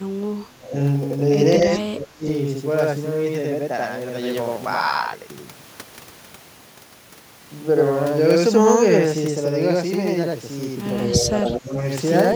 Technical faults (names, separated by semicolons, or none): channel delay (doubling); speech suppressed in double talk